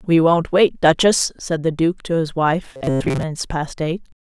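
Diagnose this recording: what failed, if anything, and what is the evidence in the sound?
Robotic sound from repeated short buffers runs from 2.74 to 3.23 s, where the speech collapses into a rigid, metallic buzz pitched at 133 Hz that only loosely tracks the syllables. The failure is likely at the driver or buffer stage: audio arrived too slowly, so a fragment of about 7.5 ms was replayed over and over in place of most of the real signal. That repetition period is what imposes the fixed 133 Hz tone.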